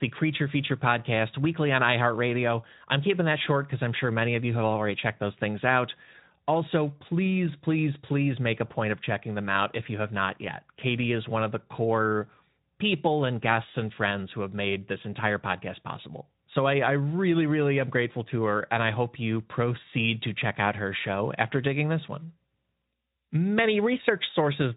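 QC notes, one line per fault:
No faults to log for this speech clip. The Speex codec path sounds consistent with a setting near 15 kbps, with only light coding roughness and nothing audible above 3.8 kHz.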